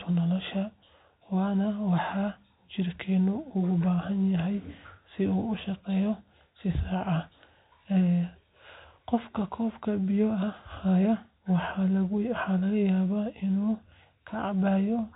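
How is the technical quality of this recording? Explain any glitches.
No glitches can be heard anywhere in this recording.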